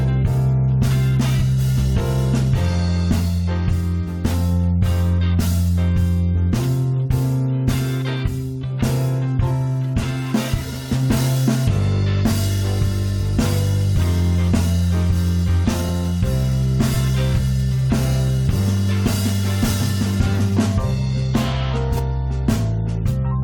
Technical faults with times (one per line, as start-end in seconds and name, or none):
21.97-21.99 corrupt frame decoded